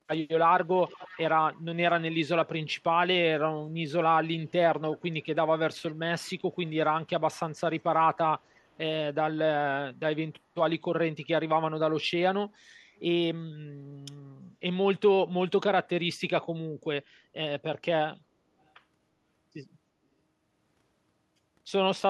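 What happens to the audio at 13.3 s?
Nothing goes wrong at 13.3 s; the speech there plays through intact, with no dropout, click, distortion or other fault.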